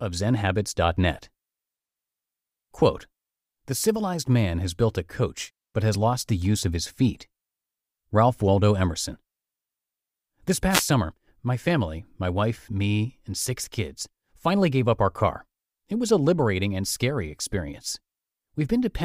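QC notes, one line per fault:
10.70–10.84 s, wireless microphone noise hit: a quick swish of static, about 0.15 s long, washes over the speech. The FM radio link from the mic faded as reflected signals cancelled, so the receiver's own hiss jumped up.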